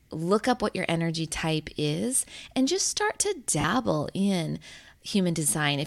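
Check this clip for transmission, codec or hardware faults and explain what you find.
The clip has lost LE Audio frames in two places, with light lossy compression throughout. At 1.32 s, a brief 10 ms gap fits one lost frame. From 3.61 to 3.64 s, a 30 ms loss fits three frames. The LC3 decoder refills gaps by repeating the last spectrum with random signs. The speech becomes a short, noisy smear.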